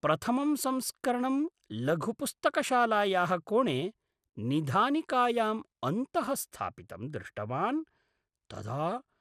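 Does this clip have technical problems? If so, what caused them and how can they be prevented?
Yes. Throughout the speech there is plainly audible MP2 compression damage, likely from encoding at too low a bitrate, which fits around 80 kbps. Starved of bits, the encoder drops upper sub-bands and quantises the remaining ones coarsely. The result is dull, gurgling, granular speech. A spectrogram shows nothing above 15.1 kHz and upper bands flickering on and off in blocks. Encoding at a higher bitrate, or with a more efficient codec, would prevent it.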